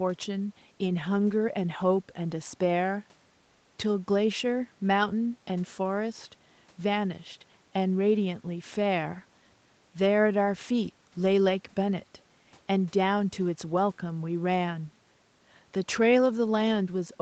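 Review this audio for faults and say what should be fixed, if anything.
Nothing should be fixed, as there are no faults in this audio.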